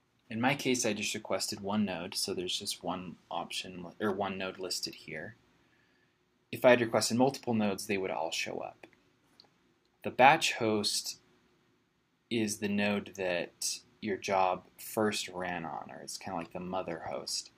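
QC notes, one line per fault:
No faults heard in this clip.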